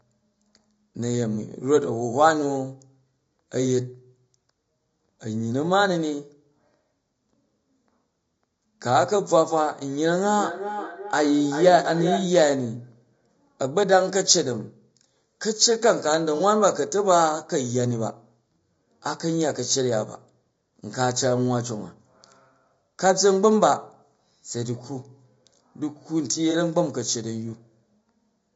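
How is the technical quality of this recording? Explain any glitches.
The recording has clear technical problems: a hollow, phasey tone and coarse codec grain throughout, an echo burst in the middle, and two brief dropouts.

Channel delay (comb filtering), throughout: one channel runs a fraction of a millisecond behind the other, and the mono sum cancels at evenly spaced frequencies starting around 3 kHz. The result is a thin, hollow upper range with fixed notches that never move.

Low-delay AAC compression, throughout: the likely cause is AAC-ELD, whose short frames resolve pitch harmonics poorly and spend bits inefficiently. The speech sounds rough and grainy, with noise filling the gaps between harmonics and a synthetic-sounding top band, consistent with a bitrate around 32 kbps.

Feedback echo between two devices, 10.25 to 12.46 s: two devices in the same room joined the call, and one microphone re-captured the other's loudspeaker output, which its echo canceller could not remove. 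The speech returns at roughly 0.4 s intervals, peaking at about 8 dB below the direct speech, thinner and more ringing on each pass.

AAC frame loss with concealment, 16.37 to 16.42 s and 26.51 to 26.56 s: the decoder lost data and filled each gap from the last good spectrum. Each gap is about 30 ms, consistent with a single lost frame, and is heard as a short smeared, noisy patch.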